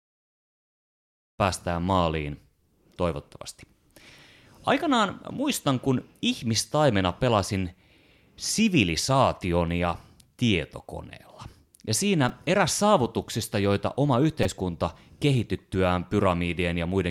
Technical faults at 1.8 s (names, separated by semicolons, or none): none